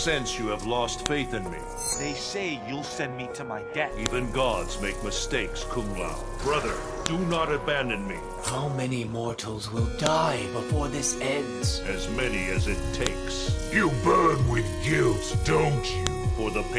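File header played as audio appears as a sharp, loud click at 1.06, 4.06, 7.06, 10.06, 13.07 and 16.07 s, spaced exactly 3.0 s apart. The audio was assembled from 3-second pieces whose WAV headers were never stripped, so each header's few dozen bytes were read as sample values. That data lands as an abrupt snap at every join, unrelated to whatever the surrounding sound is doing at that moment.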